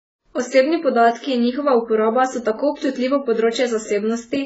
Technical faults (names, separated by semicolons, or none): AAC compression